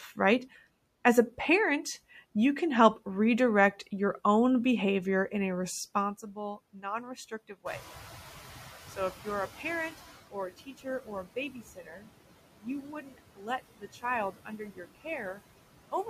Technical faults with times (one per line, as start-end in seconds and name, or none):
0.00-16.09 noise suppressor artifacts
6.73-6.84 speech cut by the noise suppressor
7.65-10.19 noise suppressor catching up
8.96-9.27 speech cut by the noise suppressor
10.31-12.07 speech cut by the noise suppressor
12.62-15.40 speech cut by the noise suppressor